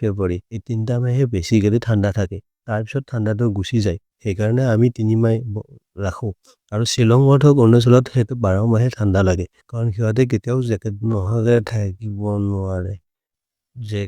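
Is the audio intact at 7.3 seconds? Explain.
Yes, the audio at 7.3 seconds is intact, with no dropout, click, distortion or other fault audible at that moment.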